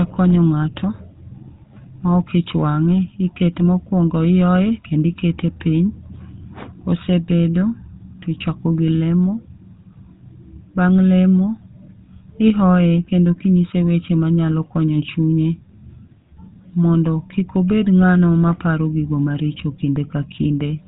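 From start to finish the speech carries GSM full-rate codec damage, plainly audible: a buzzy, gravelly roughness from the coarse pulse-train excitation, and nothing above about 3.8 kHz, so it sounds dull and boxed-in. That fits the old 13 kbps GSM full-rate path.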